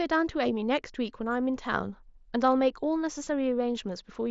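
At 3.24 to 3.27 s, concealed Bluetooth headset packet loss: a short run of voice packets, which fits about three lost frames, dropped between headset and phone, and the receiver filled the 22.5 ms gap by repeating recent waveform, giving a brief buzzy hold and slight warble over the wideband mSBC speech.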